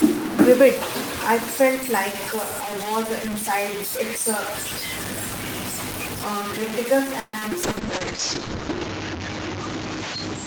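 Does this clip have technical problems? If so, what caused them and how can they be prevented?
Yes, the clip has four separate faults.

Low bit depth without dither: the whole speech clip is coated in harsh, grainy distortion that rises and falls with the sound, with the noise nearly as loud as the speech. This likely comes from truncating the signal to very few bits without dither, which fits a 4-bit word length. Prevent it by keeping at least 16 bits and adding dither whenever bit depth is reduced.

Call audio freeze: from 7.19 to 7.35 s the sound stalls into a fading buzz, with a brief dropout of about 10 ms, then resumes from where it stopped. This is likely because packets arrived late and the jitter buffer ran dry. About 140 ms was filled in, nothing was lost, and everything after it is pushed back by that amount. An adaptive jitter buffer with more headroom on an unstable network prevents it.

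Short concealed packet loss: at 7.39 to 7.43 s there is a short smear, where roughly 20 ms of audio never reached the decoder and was replaced by a continuation of the preceding sound before blending back into the real signal. Forward error correction or redundant packets prevent it.

Call bitrate drop: from 7.64 s to the end the speech turns muffled and watery. This fits the encoder falling from about 32 to 7 kbps after the bandwidth estimate collapsed, with the audio band shrinking from 20 kHz to 8 kHz. It stays at its worst for about 1.2 s. Better bandwidth estimation and a higher minimum bitrate would prevent it.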